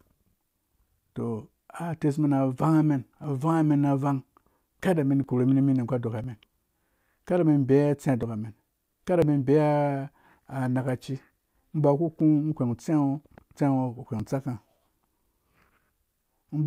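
From 3.24 s to 16.2 s, periodic USB or driver dropouts occur: something stalls the audio path about once every 1.0 s, and a few milliseconds of speech are skipped each time. The result is around fifteen evenly spaced ticks, audible only while speech is present.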